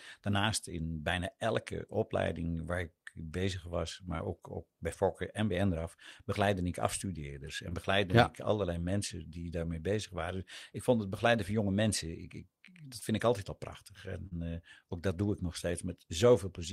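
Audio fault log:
4.17–4.21 s, 7.69–7.73 s, 12.99–13.03 s, 14.27–14.33 s: short concealed packet loss. About 20 ms of the speech stream arrived too late or not at all each time, and 40 ms in the last case. The decoder bridged each gap by extending the preceding sound, following its pitch where voiced or using shaped noise where not, then faded back into real audio. Each dropout is heard as a brief smear or wobble.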